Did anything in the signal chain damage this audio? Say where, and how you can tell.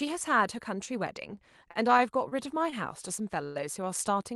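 Yes. From 1.35 to 2.34 s the speech stutters and drags in four small hitches, each a brief hold of the last sound, the longest about 29 ms and 84 ms in all. These are repeated stalls (stutter) at the network and jitter-buffer stage: packets arrived late, the buffer kept emptying, and the receiver stretched sound to cover, so nothing is lost.

At 2.70 to 2.74 s one sound is held about 20 ms too long, with a faint buzzy dip. This is a short stall from a late packet: one packet missed its slot, the jitter buffer ran dry, and the receiver extended the previous audio until it arrived.

From 3.44 to 3.57 s the sound hangs as a fading buzz for roughly 111 ms, never dropping to silence, then resumes exactly where it stopped. This is a call audio freeze, likely caused by packets being held up in transit, with the receiver concealing the wait.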